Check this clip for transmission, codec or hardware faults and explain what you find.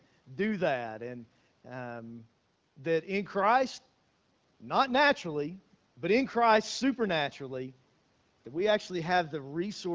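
I found no faults in this clip.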